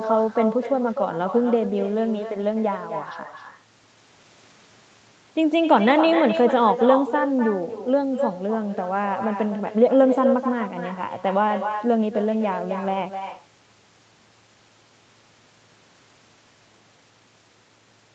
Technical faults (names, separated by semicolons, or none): echo with no canceller